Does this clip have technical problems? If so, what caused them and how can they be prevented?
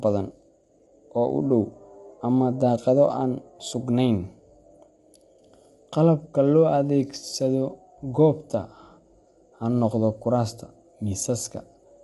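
Yes. The speech sounds rough and grainy from start to finish, with a hiss-like fill between the harmonics, and nothing gets through above about 11.6 kHz. That's likely low-delay AAC compression, the AAC-ELD kind used on video calls. Its short frames can't separate the pitch harmonics cleanly, so at a bitrate that sounds like roughly 32 kbps the encoder runs out of bits and the damage is plainly audible. To prevent it, give the call a higher bitrate or record locally instead of capturing the call stream.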